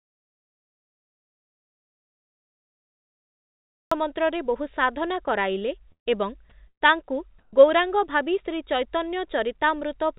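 Speech that passes through a call path with no content above 4 kHz, which fits G.711 mu-law at 64 kbps. It opens with an audio dropout to silence already under way. From 0 to 3.92 s there is silence. No room tone is left at all. The speech then arrives mid-flow. The likely cause is a lost input, such as a disconnected device, a failed link or a mute, while silence kept being written. Two bursts of packet loss follow. The first runs from 5.92 to 6.08 s, right after "ବହୁ ସାଧନା କରାଇଲେ". The second runs from 6.68 to 6.83 s, after "ବହୁ ସାଧନା କରାଇଲେ ଏବଂ". Each time the receiver stretches the last sound and fades it out. Most of the gap ends up silent, about 110 ms and 90 ms. About 140 ms of speech is skipped in each. Then the voice resumes further on. At 7.39 to 7.53 s, just before "ଗୌରାଙ୍ଗ ଭାବି", there is comfort noise in place of the background. For 140 ms the real background, about 35 dB below the loud speech, becomes a smooth, featureless hiss. 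Its level does not change. The likely cause is discontinuous transmission, with the receiver filling the pause with synthetic noise.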